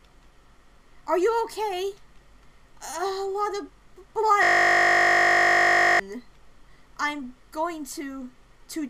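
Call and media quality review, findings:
System hang loop, 4.43–6.00 s: host or driver stalled while the audio device kept replaying its 20 ms ring buffer, producing a steady 50 Hz buzz.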